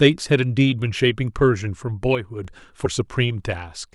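From 2.15 to 2.45 s, one stereo channel likely drops out, so after the mono sum the speech falls abruptly by about 6 dB for those three tenths of a second, then snaps back to full level when the channel returns.

At 2.85 s, compressed frames are skipped: a run of frames, roughly five at 24 ms each, never reaches playback, so the speech jumps ahead by about a tenth of a second.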